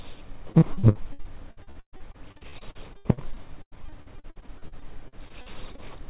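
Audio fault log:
0.52–5.80 s: repeated packet loss (robotic sound). Packets kept going missing or arriving late, dozens of times across this span. Each hole was bridged by extending the previous sound, so about a third is filler, with gaps up to 130 ms. The result is choppy, with pieces missing.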